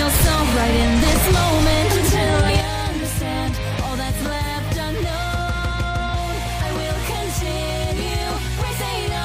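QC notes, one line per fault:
2.48 s and 6.13 s: compressed frames skipped. The audio jumps ahead about 150 ms each time, roughly seven 21.3 ms frames.
2.61 s to the end: one channel drops out, likely. The level falls abruptly by about 6 dB and stays down, as if only one stereo side remains.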